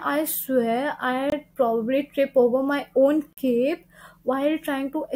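Two hard-edged dropouts cut the speech: a silence of about 22 ms from 1.30 to 1.32 s, and a longer one of about 44 ms from 3.33 to 3.37 s. Both are gaps between stream segments. The audio arrives in 2-second segments, and at these joins the timestamps leave small holes that the player fills with silence. The sound stops and resumes abruptly, but nothing is lost; the speech is simply pushed later.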